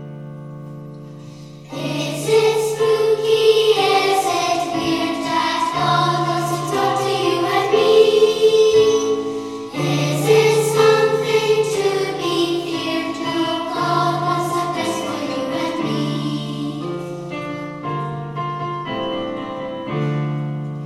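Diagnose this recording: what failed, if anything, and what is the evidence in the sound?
Nothing failed at any stage here; there's no dropout, glitch or other defect to point to anywhere in the sound.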